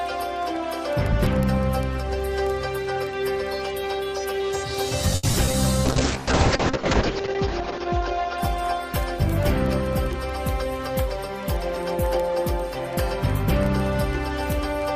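From 5.15 to 5.55 s, repeated packet loss struck four times in quick succession. The receiver filled about 140 ms by stretching earlier sound and left roughly 60 ms silent, with the longest hole 80 ms. About a third of the stretch is patched, so the audio turns choppy and robotic.

Between 5.86 and 11.68 s comes a call bitrate drop. The encoder was starved of bits, which fits a fall from around 128 kbps to about 6 kbps, held at its lowest for 1.25 s. The audio loses everything above 8 kHz and sounds coarse and muffled.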